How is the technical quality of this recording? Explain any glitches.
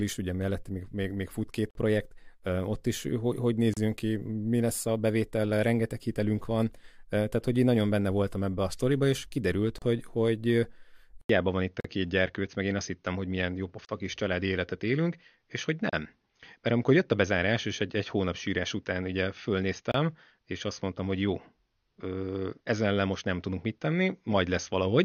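The recording has two kinds of glitches: repeated short dropouts and an abrupt change in tone partway through.

Gap between stream segments, at 1.71 s (after "még még fut két"), 3.74, 9.78, 11.80, 13.85, 15.90 and 19.92 s: mistimed 2-second segments leave 27–47 ms holes filled with hard-edged silence. No audio is lost.

Input switched to a poorer device, from 11.21 s after "és kiderült hogy hogy": an 80 ms silence, then dull sound with nothing above 6.5 kHz. This is likely a change of microphone. Faint new background noise appears, and the level stays about the same.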